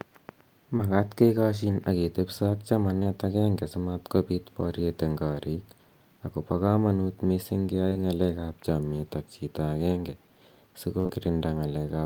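Right at 0.77 s, just before "kekashin ak ketepisa ak", there's a short concealed packet loss: about 20 ms never arrived, so the decoder stretched the last sound and blended back, giving a quick smear. Right after "kekashin ak ketepisa ak", two of them land back to back from 2.99 to 3.07 s, and another pair runs from 7.89 to 7.97 s, each a small wobble. At 10.99 s a burst of packet loss drops about 60 ms. The decoder holds the last sound as it fades, then jumps ahead with that stretch gone. One more short loss follows straight on, from 11.07 to 11.11 s, extending the smear.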